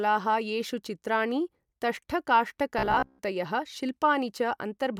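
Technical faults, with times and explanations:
2.79–3.19 s, robotic sound from repeated short buffers: a rigid metallic buzz at 66.8 Hz replaces most of the speech, likely from a chunk of about 15 ms looping. Unlike dropouts, nothing goes silent.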